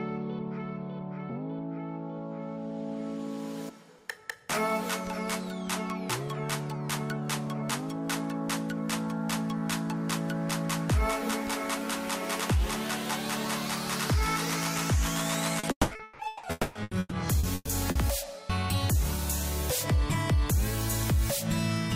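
Repeated packet loss (robotic sound) sets in at 15.59 s and runs to 16.46 s: a handful of holes, the longest about 200 ms, are each patched by repeating the preceding sound, so about 69% of the span is filler and the audio turns choppy, with pieces missing.

Long network dropout from 16.51 to 16.78 s is heard as a 240 ms stretch of smeared, continued sound with no true silence. The likely cause is a run of audio that never arrived, after which the sound resumes with that piece gone.

Repeated packet loss (robotic sound) returns at 16.83 s and lasts to 17.98 s, with shorter holes of up to 120 ms concealed the same way. About 35% of the span is filled in, so the robotic choppiness is lighter than before.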